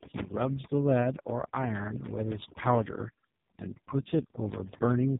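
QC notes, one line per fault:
Throughout: overdone noise removal. The background drops and breaks up into twinkling, glassy specks. A noise reducer pushed too hard is cutting individual frequency bands far down or out whenever they sit close to its noise estimate, and the quieter parts of the speech fall below that threshold and vanish along with the noise, leaving isolated bands that flicker on and off.
Throughout: AMR narrowband mobile codec. The speech sounds buzzy, synthetic and muffled, with heavy codec damage and nothing heard above 3.8 kHz. This is the AMR-NB mobile speech codec, running at 4.75 kbps, its lowest rate, which rebuilds the voice from a vocal-tract model driven by only a few pulses per short subframe. With so few bits the excitation is crude, giving the mechanical buzz, while the narrowband sampling removes everything above the telephone band.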